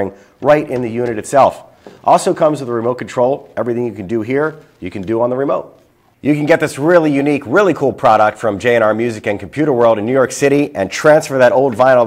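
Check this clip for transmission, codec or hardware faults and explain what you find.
No faults detected.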